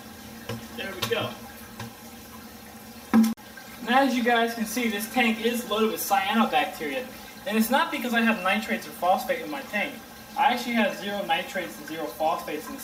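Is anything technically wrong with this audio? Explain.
No, nothing is technically wrong with this audio.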